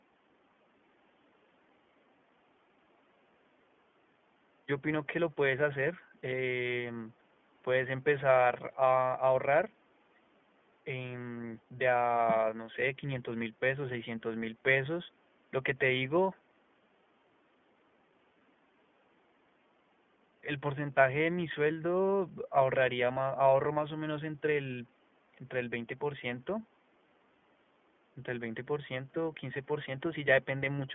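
Speech that sounds thin and boxed-in throughout, with a plainly audible rough, slightly synthetic edge. This is iLBC codec damage: the narrowband line keeps only about 200 Hz to 3.4 kHz, and each 20 ms frame's excitation is coded independently, consistent with the 15.2 kbps mode.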